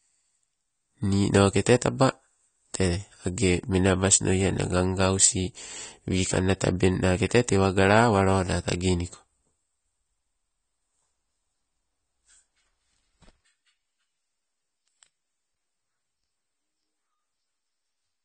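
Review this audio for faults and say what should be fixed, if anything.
AAC compression damage runs throughout. Nothing sounds above 9 kHz, and the speech is dull and plainly smeared, which points to a likely AAC-LC encode near 32 kbps. To prevent it, re-encode from the original source at a higher bitrate.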